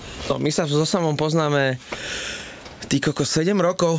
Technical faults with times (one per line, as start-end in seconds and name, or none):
0.00-3.98 gain pumping